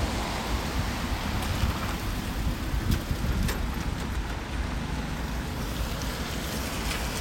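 No technical faults can be heard in this recording.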